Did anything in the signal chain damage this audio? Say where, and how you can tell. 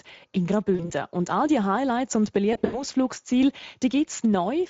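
Yes. At the codec stage, the Speex codec runs at a middling rate, consistent with a setting around 17 kbps. Its thin excitation leaves the speech audibly hoarse and noisy throughout all 4.7 seconds.

At the network stage there is VoIP packet loss concealed by the speech codec. From 0.75 to 0.91 s, about 40 ms went missing. From 2.53 to 2.84 s, losses scatter over 200 ms with an 80 ms longest gap. The decoder extrapolates into a fading tone or noise and stays weak afterward.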